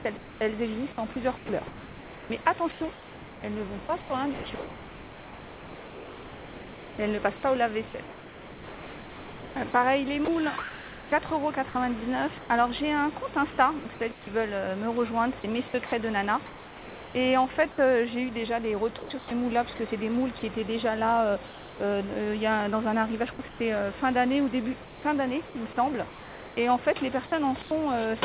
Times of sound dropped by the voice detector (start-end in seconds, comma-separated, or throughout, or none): 21.47-21.80